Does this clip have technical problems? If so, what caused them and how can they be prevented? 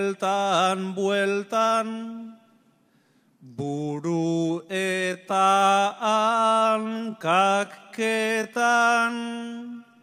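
Yes. From 3.79 s to the end, a time-stretched section slows the pace to about 0.7 times speed while pitch holds, so the sound drags. This was likely caused by software repeating short grains to fill a longer duration. On a spectrogram, harmonics stay level but events stretch horizontally. Prevent this by re-recording or editing at the correct length instead of stretching.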